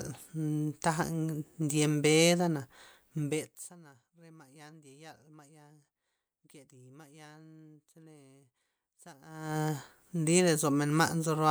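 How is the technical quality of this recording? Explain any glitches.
There's one glitch worth flagging in this speech recording: a burst of zipper noise from 3.16 to 3.73 s. Over that stretch the level drops by roughly 25 dB, but it gets there in 1 dB jumps, around 50 a second, with no smoothing in between. Each jump puts a tiny discontinuity in the waveform, so you hear a fast ticking, almost a buzzy zip, riding on top of the speech while the level slides down.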